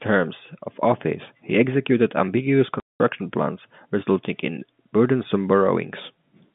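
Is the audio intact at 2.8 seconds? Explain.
No. At 2.8 seconds the speech breaks off into a gap of packet loss filled with silence. It lasts until 3.0 seconds, so 200 ms of audio is missing. That fits ten lost 20 ms packets. The hole falls right after "office he executed ambitious" and ends just before "plans resulting in burdensome". The receiver had nothing to play, so it inserted dead silence. The speech stops and restarts abruptly at hard edges.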